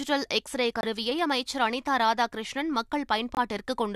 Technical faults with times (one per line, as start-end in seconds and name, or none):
0.81-0.85 corrupt frame muted
3.35-3.38 corrupt frame muted